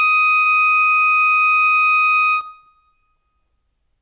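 At 0.42 to 0.47 s, a short concealed packet loss: 40 ms of the music arrived too late, so the receiver stretched the preceding sound, leaving a brief smear. The call codec passes nothing above 4 kHz.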